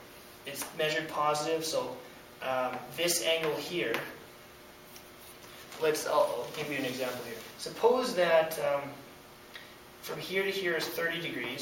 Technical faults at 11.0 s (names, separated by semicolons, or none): none